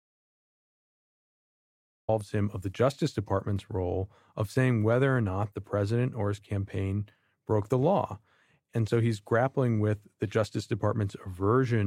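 The input to the recorder was likely lost for the opening stretch, through a disconnected device, a failed link or a mute, while silence kept being written. This speech recording therefore begins with an audio dropout to silence that is already in progress: from 0.0 to about 2.09 s there is silence with no room tone at all, and the speech then arrives abruptly mid-flow. Whatever was spoken during that gap is missing.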